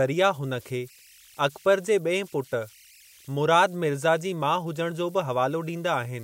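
It's a speech recording with converter idle tones running all the way through: a faint whistle around 2 kHz, sitting about 30 dB below the speech. It points to an undithered delta-sigma converter settling into repeating bit patterns whenever the input gets small.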